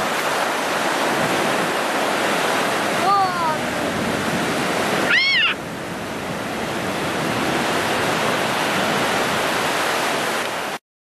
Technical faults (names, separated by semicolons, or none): none